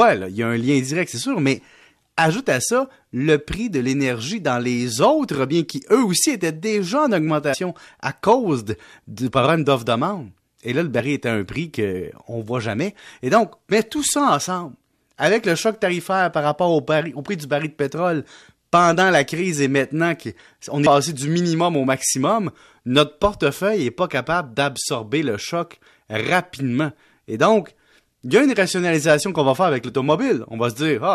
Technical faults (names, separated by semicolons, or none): compressed frames skipped